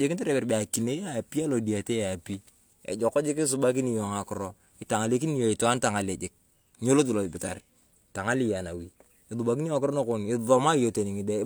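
Speech recording with no audible technical faults at any point.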